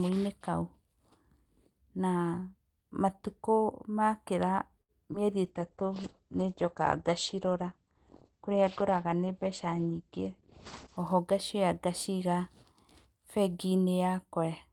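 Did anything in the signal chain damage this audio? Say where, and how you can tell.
Yes. Network and jitter buffer: a short stall from a late packet at 4.81 to 4.91 s holds the sound for 75 ms, then resumes intact. Unlike loss, nothing is missing.

Network: a short concealed packet loss at 5.13 to 5.16 s briefly smears the audio. 20 ms never arrived and is missing, with 10 ms patched over, so audio is lost, not just held.

Codec and call processing: a call bitrate drop from 5.46 to 11.04 s, 40 to 11 kbps, turns the speech coarse and muffled as bandwidth shrinks from 20 kHz to 8 kHz. A dull tone from the lost highs points to the encoder, not a damaged packet.

Jitter buffer: a jitter buffer speed-up at 10.98 to 11.64 s makes the speech run 6% faster at unchanged pitch, trimming about 40 ms. The unchanged pitch rules out resampling drift.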